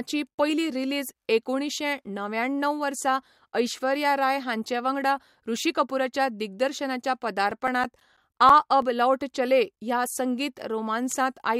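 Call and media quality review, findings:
CD scratch ticks, 7.35–8.82 s, right after "वांगडा ऋषि कपूराच्या दिग्दर्शनाच्या". Disc scratch exceeds error correction once per revolution; player interpolates or mutes samples. Heard as 10 regular ticks, about 7 per second, longest around 10 ms.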